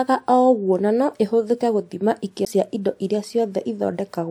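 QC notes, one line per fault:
2.45 s, CD skip: a tick and a brief mute of around 15 ms as the laser loses its track and lands on another turn of the spiral, so the speech resumes from a different point. The waveform shows a near-flat gap with a sharp edge, and the spectrogram a thin broadband vertical line and a discontinuity.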